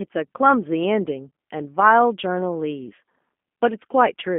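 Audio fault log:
Throughout: G.729 codec. Speech confined to about 200 Hz–3.4 kHz, plainly rough and synthetic from pulse-based frame rebuilding, consistent with an 8 kbit/s coder.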